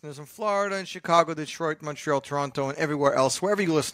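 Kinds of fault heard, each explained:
Microphone volume stepped up: The call software judged the microphone too quiet and raised its input volume in a single step. In this speech clip it happens three times, at 1.02, 2.04 and 3.06 s. Each step is abrupt, about 5 dB and then about 4 dB twice. The voice and the background noise get louder together at each point. The level climbs in a staircase rather than a smooth ramp.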